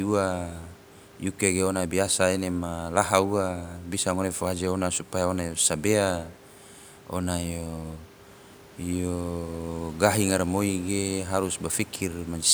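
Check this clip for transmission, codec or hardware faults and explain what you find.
No transmission, codec or hardware faults.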